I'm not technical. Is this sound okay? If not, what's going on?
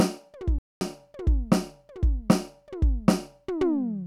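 No. The music drops out from 0.59 to 0.81 s, a playback stall of about a quarter second, likely the player briefly running out of audio data.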